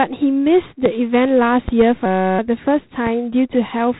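G.726 ADPCM coding runs through the whole speech clip. Each sample is sent as a coarse difference from a predicted value. The harsh, rasping hiss rises and falls with the speech, which points to the 24 kbit/s mode. Nothing passes above 3.9 kHz.

From 1.68 to 1.84 s, a loud pop strikes twice in quick succession. They peak about 10 dB above the speech. The speech carries on underneath. The cause is likely a sudden voltage step, from a switch, plug, static or driver glitch, reaching the signal.

From 2.06 to 2.39 s, a system hang loop takes over. The driver stalled while the hardware kept replaying one 5.33 ms slice, which fits a 256-sample buffer. It repeats around sixty times. This is heard as a steady buzz at 188 Hz.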